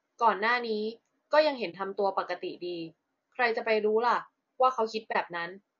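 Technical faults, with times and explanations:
Throughout: low-delay AAC compression. The speech sounds rough and grainy throughout, and the damage is plainly audible. Noise fills the gaps between the harmonics. The top band sounds thin and partly synthetic. This is likely AAC-ELD, the low-delay codec of video calls. Its short frames cannot separate pitch harmonics cleanly, and they use bits less efficiently. At a low rate, fitting roughly 32 kbps, the coder runs short and fills detail with noise.
1.70–1.74 s and 5.12–5.16 s: AAC frame loss with muting. At each time the sound briefly drops out, losing about 30 ms. The gap has soft edges. The decoder lost a block of coded audio and set that stretch to silence. The overlapping windows on each side fade the sound down into the gap and back up after it. That fade rounds off the edges and makes a brief dip rather than a sharp cut.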